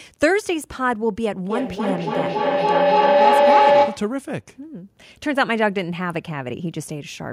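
Feedback howl from 1.5 to 4.26 s: a microphone-loudspeaker loop gains level each pass, building a tone around 500 Hz, pulsing roughly every 300 ms, about 8 dB above the speech.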